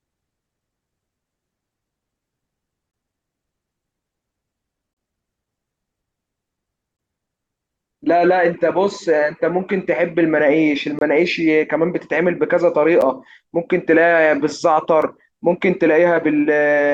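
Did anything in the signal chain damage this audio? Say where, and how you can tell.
Yes, there's a gap between stream segments, at playback. Hard-edged silent holes land at 2.91, 4.93, 6.97, 10.99, 13.01 and 15.02 s, lasting about 3 to 33 ms, on a 2-second grid. Segment timestamps don't quite abut, so the player pads the difference with silence.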